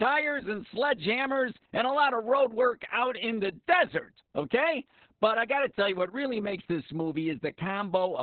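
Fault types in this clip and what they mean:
Opus voice compression: Nothing remains above 4.4 kHz. The speech sounds muffled, hoarse and robotic, which fits narrowband SILK coding near 6 kbps.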